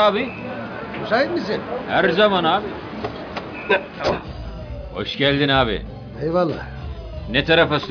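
Nothing here stands out as a technical fault; the sound runs along without any dropouts, glitches or other trouble along the way.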